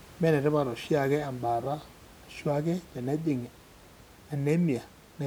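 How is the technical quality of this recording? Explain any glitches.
No glitches can be heard in the recording, and the only background is the room's own noise sitting about 24 dB below the speech, which belongs to the space where it was recorded rather than to any technical problem.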